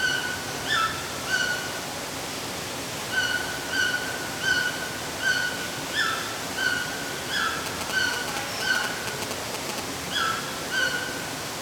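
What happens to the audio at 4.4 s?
Nothing goes wrong at 4.4 s; the sound plays through that moment intact, with no dropout, click or other fault.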